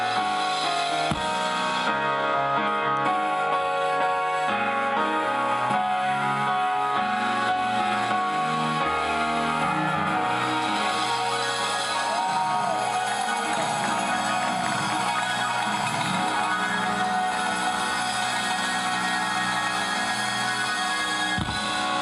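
No dropouts, clicks, distortion or level jumps turn up anywhere in the audio.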